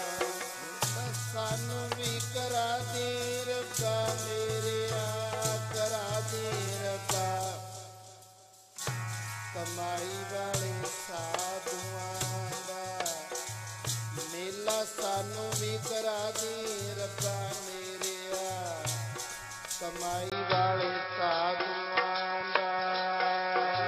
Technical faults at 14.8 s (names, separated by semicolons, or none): none